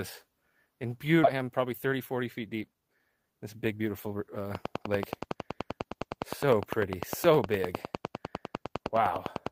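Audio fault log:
1.23 s, skip ahead: the sound jumps forward here with no gap filled in, and roughly a second of material is simply gone. The two sides of the cut butt straight up against each other, so there's no silence or smoothing, just a sudden splice. That pattern fits a burst of audio being thrown away, probably when the buffer overflowed or packets never arrived, cutting the delay by about a second in one go.
1.33 to 4.45 s and 4.87 to 5.36 s, jitter buffer speed-up: in both stretches the audio runs at about 109 percent speed while the pitch stays put, so it comes across a bit rushed. That's the receiver trimming tiny slices, a pitch period or a few at a time, over and over to drain a backlog. The first stretch sheds roughly 300 ms and the second, shorter one roughly 50 ms.
4.55 to 9.48 s, train of clicks: a steady ticking rides over the sound right to the end, at about 9.86 clicks per second and evenly spaced, around fifty in all. 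The clicks stand out at about 15 dB above the sound and carry on through quieter moments too. Because they're so regular and alike in shape, the likely cause is interference from nearby equipment or a faulty connection or power supply.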